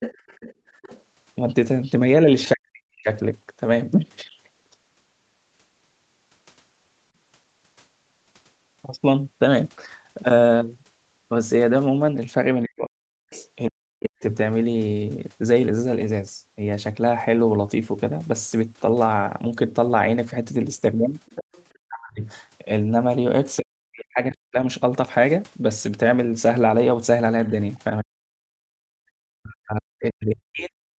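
A faint second voice runs under the talker from 0.0 to 4.37 s, roughly 15 dB down. This is likely the other side's voice leaking through: the loudspeaker playback was not fully removed from the microphone by the echo canceller.

Within that stretch, at 0.54 to 0.66 s, the room sound briefly sinks by about 13 dB for roughly a tenth of a second. This is background gated by the echo canceller, which clamped the microphone while the loudspeaker played and then released it.

From 2.54 to 3.09 s the talker's voice collapses, dropping on the order of 40 dB for about half a second. This is likely speech suppressed in double talk: with both sides speaking, the canceller could not separate the talker from the echo and turned everything down.

What is likely the same suppression returns from 12.64 to 14.23 s, chopping about a second of the talker's speech. Inside it, at 13.31 to 13.45 s, a brief scrap of what is likely the other side leaks through, very faint at around 25 dB below the speech.

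At 21.26 to 21.78 s the second voice, likely leaked again, comes back at roughly 15 dB down. Right after it, from 21.88 to 24.57 s, the talker cuts in and out, losing about a second in total, likely to double-talk suppression.

A final stretch of likely suppression starts at 28.01 s and lasts to the end. Within it, from 28.48 to 29.0 s, the background is gated hard, falling by about 40 dB for around half a second before returning.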